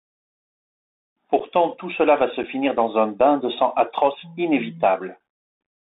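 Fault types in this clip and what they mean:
Bluetooth CVSD headset codec: The speech sounds thin and boxed in, held to about 200 Hz to 3.7 kHz, with scratchy s sounds, roughness on loud bright moments and a grainy hiss underneath. A one-bit up/down coder at 64 kHz cannot track fast changes with its adaptive step.
Unconcealed Bluetooth headset packet loss: Three brief hard-edged dropouts break the speech, at 1.40, 2.43 and 5.20 s, each about 7.5 ms long. A couple of short voice packets between headset and phone went missing each time, and nothing filled the gap.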